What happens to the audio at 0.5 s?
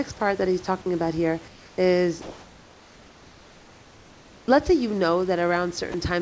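At 0.5 s the speech passes through intact, with no dropout, click or distortion at that point.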